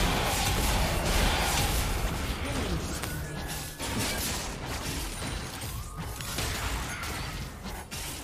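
At 3.04 s a sharp snap cuts across the sound, and at 6.21 s a second, quieter one follows: an electrical switching spike each time, likely a nearby switch, motor or static discharge arcing briefly and coupling into the audio line. The first peaks around -10 dBFS, the second nearer -15 dBFS. On a waveform each shows as a thin isolated spike, and on a spectrogram as a narrow vertical stripe spanning the full frequency range.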